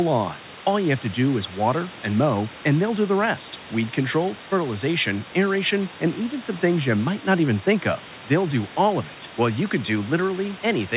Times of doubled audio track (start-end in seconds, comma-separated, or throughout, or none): none